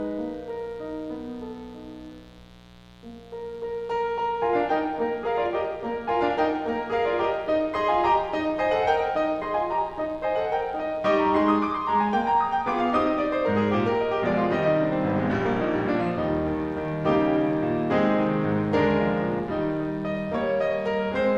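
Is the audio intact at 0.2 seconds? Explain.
No. At 0.2 seconds the music already carries mains buzz, and it continues through the whole clip rather than starting at that moment. It is locked to a 60 Hz supply: sharp switching spikes, such as those from a dimmer, rectifier or unshielded cable, arrive twice per cycle and spread harmonics of 60 Hz up into the kilohertz range. The result is a steady, raspy buzz sitting roughly 25 dB under the music.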